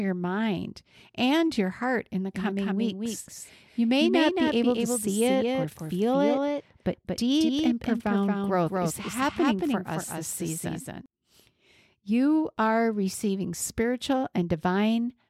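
A speech recording with a doubled audio track running from 2.34 s to 11.06 s. A second, full-band copy of the speech trails the original by roughly a fifth of a second and sits a few decibels below it. It has no decay or room colouring, and it cuts in and out abruptly at those two points. The likely cause is a slower second capture path, or an edit that left two copies out of alignment.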